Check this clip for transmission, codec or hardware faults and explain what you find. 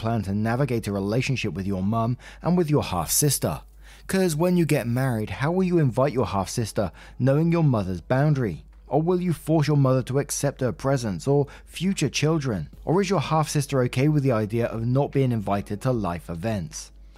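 One fault is present: pre-emphasis left on, from 2.82 to 5.21 s. Across that stretch the treble jumps up. At 10 kHz the level is about 10 dB higher relative to 1 kHz. The shape of the lift fits the standard 50 µs FM curve. A boost like this is applied before transmission to protect the highs, and the receiver should cut it back. Here that matching cut never happened. The speech turns thin, bright and hissy, with harsh sibilants.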